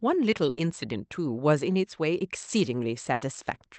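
Bursts of packet loss at 0.49–0.59 s and 3.13–3.23 s: lost audio is concealed by about 80 ms of fading held sound, visible as smeared, decaying spectrogram bands, then audio skips ahead, under call-codec band-limiting near 8 kHz.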